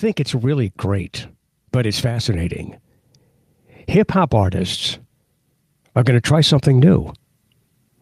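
Speech, with automatic gain rising from 0.3 to 2.58 s: the level control judged the input too quiet and raised its gain by about 4 dB over those two-odd seconds, so voice and background noise swell together rather than settling at a fixed level.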